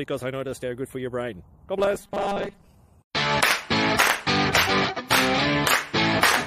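The audio turns robotic from 1.79 to 2.67 s. Across that span it becomes a rigid, metallic buzz at a fixed 200 Hz that still loosely tracks the underlying sound. This is robotic sound from repeated short buffers. The likely cause is new audio arriving too seldom, with playback looping the last chunk to fill the gaps. The 200 Hz buzz fits a 5 ms repeat. About half the material in that stretch is repeats, not real signal.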